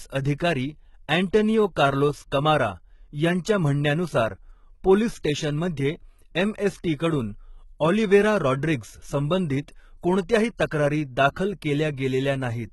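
From start to finish the speech carries heavy codec damage that is likely HE-AAC compression. The upper band sounds bright but synthetic, rebuilt from copied lower bands rather than coded, so s sounds come out gritty and lispy and the treble fails to track the harmonics beneath it. Unlike a plain lowpass or coarse MP3 smearing, the top end is present yet artificial, and it stops entirely around 11.8 kHz, which points to a very low bitrate near 16 kbps.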